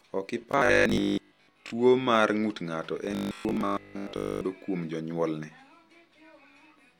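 From 0.42 to 1.72 s, before "mar ng’ut ng’ato", and again from 3.05 to 4.45 s, before "kuom jonyuolne", the speech becomes a rigid metallic 50 Hz buzz. This is robotic sound from repeated short buffers, likely from about 20 ms chunks replaying while most of the real audio is skipped.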